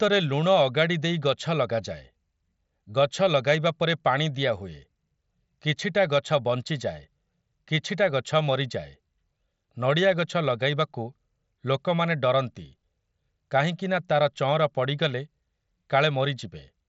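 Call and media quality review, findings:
No faults found in this speech clip. The Bluetooth mSBC headset codec path behaves as designed: the audio stops near 7.7 kHz, with only a light grain on louder passages.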